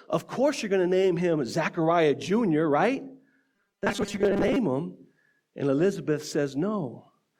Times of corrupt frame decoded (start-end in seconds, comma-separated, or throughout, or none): none